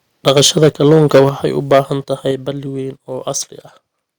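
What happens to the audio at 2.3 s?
At 2.31 s the whole speech signal drops in level in a single step, by about 5 dB. The voice and the background noise fall together and stay at the lower level. The change is abrupt, not a fade. This sounds like a microphone volume stepped down. The likely cause is the call software judging the input too loud and lowering the device's input volume in one move, rather than anything in the room changing.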